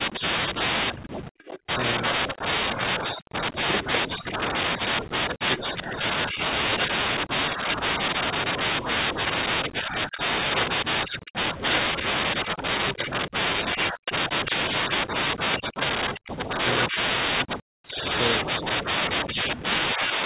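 Speech suppressed in double talk runs from 0.0 to 5.51 s. The voice repeatedly dips by as much as about 40 dB, losing around three seconds in patches, likely because an echo canceller, hearing both sides at once, turned down the near talker along with the echo.

Echo leak follows from 0.95 to 7.76 s: a copy of the voice returns 350 ms late, only a few dB below the speech. The likely cause is a loudspeaker echo canceller failing to remove everything its microphone picked up.

Speech suppressed in double talk returns from 6.43 to 17.39 s, with drops again reaching about 40 dB and roughly seven seconds chopped out in pieces. The likely cause is again simultaneous talk.

Echo leak recurs from 9.25 to 20.13 s, now 267 ms behind and about as loud as the speech itself, likely from the same incomplete cancellation.

Speech suppressed in double talk appears once more from 18.69 to 20.21 s, cutting out about a second in bursts down by about 40 dB, likely from the same double-talk gating.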